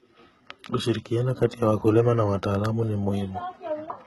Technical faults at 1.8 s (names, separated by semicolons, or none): HE-AAC compression